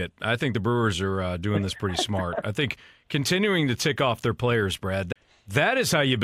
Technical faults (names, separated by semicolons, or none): CD skip